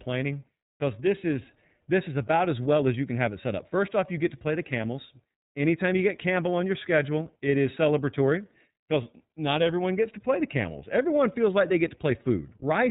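Throughout the speech, iLBC codec damage is plainly audible: each 30 ms frame is coded independently, and everything above 4 kHz is cut off. The speech sounds rough and synthetic, which fits roughly 13 kbps. A spectrogram shows an empty band above 4 kHz.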